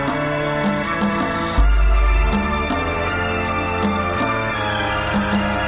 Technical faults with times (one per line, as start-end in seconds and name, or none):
none